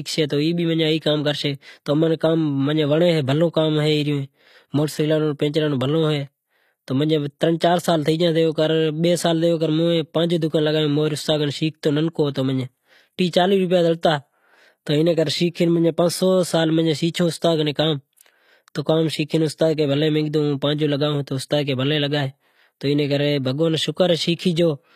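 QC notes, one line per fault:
Throughout: HE-AAC compression, likely; treble is rebuilt from copied lower bands, so s sounds turn gritty and lispy rather than dull, with nothing above 14.9 kHz.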